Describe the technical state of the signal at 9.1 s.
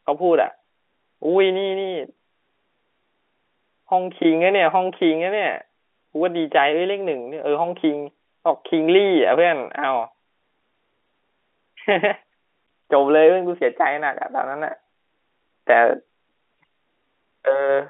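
At 9.1 s the audio is intact, with the narrow telephone band of the G.711 line coming through as expected and no fault present at that moment.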